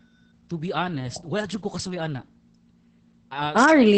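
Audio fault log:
Throughout: Opus voice compression in SILK mode; speech sounds muffled, hoarse and slightly robotic, with nothing above 8.6 kHz, fitting coarse excitation coding near 10 kbps.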